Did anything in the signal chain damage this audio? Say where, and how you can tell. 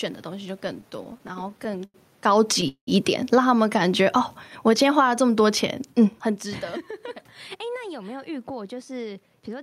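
Yes. Repeated stalls (stutter) at 0.67–1.96 s: seventeen brief jitter-buffer underruns, longest 91 ms, each stretching the last sound. Unlike a single freeze, it drags throughout.

Automatic gain falling, 2.11–5.04 s, in call processing: level sinks about 12 dB gradually, with the room background dropping too, which distinguishes it from a talker moving away.

Call audio freeze at 2.68–2.89 s: sound holds, fades into 80 ms of silence, then resumes 193 ms later with nothing lost, likely a network hold-up emptying the jitter buffer.

Jitter buffer speed-up, 5.21–8.30 s: sound runs at 105% with unchanged pitch as roughly 150 ms of pitch periods are trimmed. A resampling error would shift pitch.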